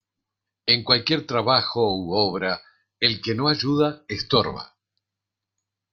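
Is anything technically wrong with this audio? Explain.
Yes. Throughout the speech, the resampler restarted on every block. Each 20 ms chunk was converted without its neighbours, in what points to a 44.1 kHz to 48 kHz conversion, leaving an error at every block edge. That produces a 50 Hz buzz riding on the speech, gone in pauses.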